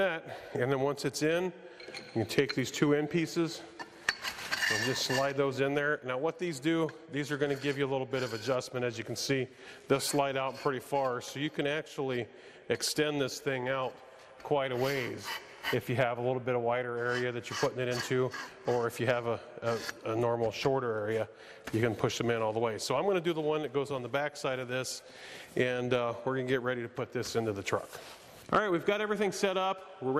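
From start to finish the sound is dull, with a plainly audible gurgling, granular distortion as upper bands flicker in and out. The likely cause is MP2 compression, at a rate consistent with about 80 kbps: whole upper sub-bands drop out and the rest are coarsely quantised.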